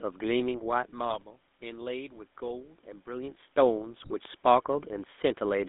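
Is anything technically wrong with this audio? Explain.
Yes. The whole clip carries GSM full-rate codec damage. Only every third excitation sample survives, and the band runs about 200 Hz to 3.6 kHz. The speech sounds buzzy and gravelly, which fits a 13 kbps GSM link.

GSM bit errors strike at 1.10 to 1.24 s and again at 4.00 to 4.16 s. Corrupted filter, pitch and gain values reach the decoder, so the speech breaks into squawks, pops and gargling.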